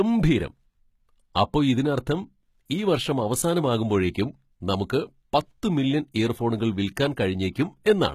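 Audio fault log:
Throughout: HE-AAC compression. The speech has most likely passed through a low-rate HE-AAC encoder, with damage fitting a bitrate near 20 kbps. Only the lower spectrum is truly coded, and the treble is synthesised by copying lower bands upward under a coarse envelope. The top end therefore sounds false, because its harmonics no longer line up with those below, and sibilants come out gritty, metallic or lispy. Nothing is present above 14.9 kHz.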